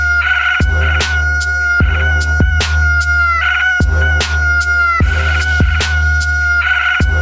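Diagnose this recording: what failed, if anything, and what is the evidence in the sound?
Nothing failed; no fault is audible anywhere.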